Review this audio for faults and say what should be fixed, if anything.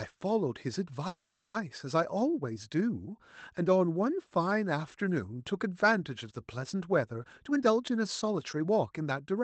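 From 1.07 to 1.56 s there is a call audio freeze. The last sound stretches into a fading buzz for about 0.47 s, likely from held-up packets draining the jitter buffer. On a spectrogram it shows as smeared, flat harmonics. Nothing is lost, but everything after arrives later.

From 7.23 s to the end at 9.43 s, a jitter buffer speed-up removes roughly half a second of pitch periods. The speech plays at 121% speed with unchanged pitch. The waveform looks compressed in time.

Both would be prevented by a steadier network path or a deeper jitter buffer that absorbs packet bursts without draining or overfilling.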